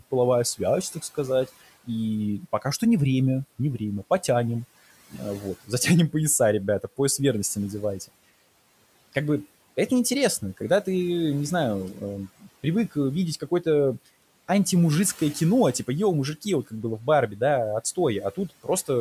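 At 12.4 to 12.65 s the speech briefly turns faint and swallowed, as though part of it had sunk into the background. The same dip returns at 18.35 to 18.68 s. Each time, around a tenth of a second of speech drops by about 15 dB. This is speech cut by the noise suppressor. The suppressor mistook these quiet stretches for the room noise, which sits about 23 dB below the speech, and turned them down along with it.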